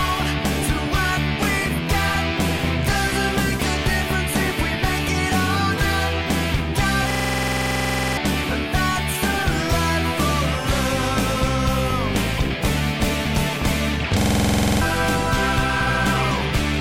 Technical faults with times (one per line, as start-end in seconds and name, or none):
7.11-8.17 system hang loop
14.21-14.81 system hang loop